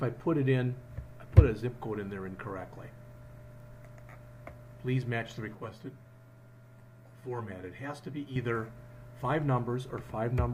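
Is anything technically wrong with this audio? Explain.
Yes. From 5.55 to 8.36 s the audio turns hollow and phasey, close to rough. This is channel delay (comb filtering): one channel arrives around 10 ms late before the mono sum, so shared content cancels at evenly spaced notches starting near 50 Hz.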